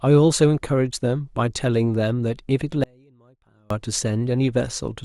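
An audio dropout to a faint residue runs from 2.84 to 3.70 s, cutting the speech abruptly for about 0.87 s. Only a faint leak remains, roughly 35 dB under normal level, likely because the signal feed broke while the downstream path stayed live.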